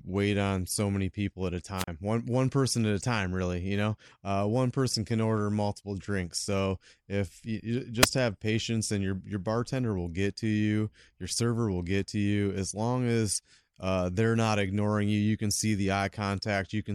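A brief burst of hiss followed by a short hole of near silence interrupts the speech at 1.76 to 1.87 s, just after "many people at a", with the gap lasting about 36 ms. A shorter flick of static at 8.01 to 8.06 s, after "if you you" and before "have patience and your", barely mutes at all. Both are wireless microphone squelch dropouts: the FM radio signal fades, noise rises, and the receiver's squelch briefly cuts the output.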